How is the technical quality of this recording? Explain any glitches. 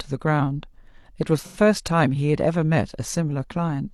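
One glitch stands out. From 1.40 to 1.57 s the speech turns briefly smeared and phasey, a noisy patch where detail blurs. That is AAC frame loss with concealment: about 85 ms of coded audio, which fits two lost frames, went missing, and the decoder patched the gap by reusing the last good spectrum.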